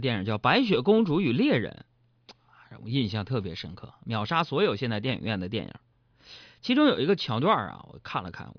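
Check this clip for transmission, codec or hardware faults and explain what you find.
No transmission, codec or hardware faults are audible anywhere in this speech recording.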